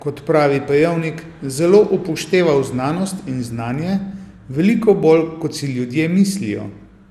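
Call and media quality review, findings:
Generation loss, throughout. Swirly, smeared, hollow speech, blurred attacks, nothing above 16.4 kHz. Likely repeated lossy re-encoding, about three passes, each requantising on a shifted frame grid so noise and holes accumulate; fits MP2 near 96 kbit/s.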